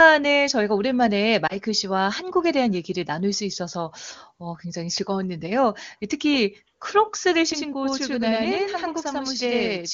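At 1.47 to 1.55 s, a single lost AMR speech frame lasting about 20 ms causes a brief dip or warble. The decoder repeats the previous pitch and vocal tract settings at falling gain. On a spectrogram, the harmonics smear flat and fade; the waveform shows a short amplitude sag before recovering slightly rough.

From 7.52 s to the end, channel delay (doubling) sets in. One channel lags by about 93 ms, which fits a 4096-sample buffer, and summing to mono makes every syllable sound twice, like an equal-level slap echo. The waveform shows each burst duplicated, and the spectrogram shows offset, repeated onsets.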